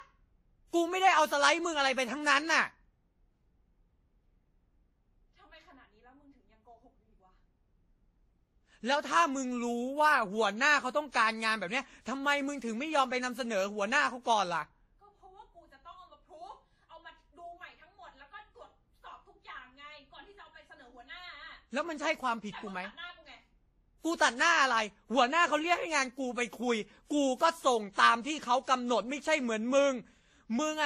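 From start to finish the speech carries two overlapping layers of compression damage, the likely sign of transcoding between lossy codecs. The earlier encode, which sounds like WMA at a modest bitrate, left its own artefacts. The later one, with the character of a low-bitrate Vorbis encode, spends bits on those and adds its own on top. Nothing is present above 15.2 kHz. A single lossy encode gives one consistent texture, but here two distinct kinds of artefact sound at once.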